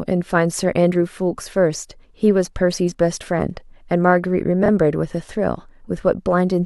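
A speech recording with one glitch: at about 4.63 to 4.69 s there's a brief garbled flutter where frames came out of order. Two neighbouring blocks of roughly 26 ms each got swapped, so that stretch plays with its halves reversed.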